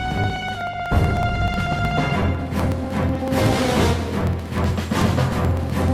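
From 0.11 s to 5.88 s the audio carries periodic USB or driver dropouts. Something keeps stalling the USB link or the audio driver every 62 ms, about sixteen times a second. At each stall a couple of milliseconds of audio simply goes missing, and the signal jumps ahead with no gap. That abrupt join makes a tick. Roughly a hundred of them run in an even, steady pattern, heard only where there is sound.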